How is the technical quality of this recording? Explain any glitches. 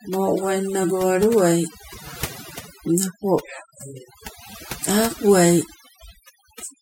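Overdone noise removal runs throughout: an overly aggressive denoiser shuts off bands near its noise estimate, leaving a lowered, twinkling background and speech with its quiet parts stripped away.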